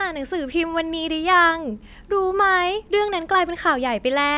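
A speech recording, and nothing is technically wrong with it.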